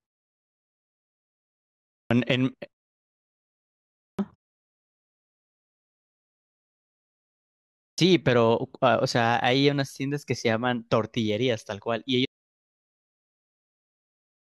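The output device is going to sleep during silence and not waking fast enough, producing a clipped start after a pause three times. At 1.94 s, after 1.94 s of quiet, about 165 ms of the returning speech is swallowed; at 4.01 s, after a 1.36 s pause, about 176 ms; and at 7.79 s, following a 3.52 s pause, about 189 ms. Each time the speech starts abruptly out of silence without its opening sounds.

At 12.25 s the input signal was most likely lost, through a disconnected device, failed link or stray mute, while the recorder kept writing silence, giving an audio dropout to silence. The speech cuts off mid-flow and the rest of the clip is dead silence with no room tone, so everything from that point to the end is gone.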